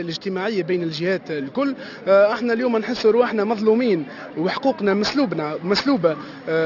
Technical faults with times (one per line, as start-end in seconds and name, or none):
0.00-6.65 aliasing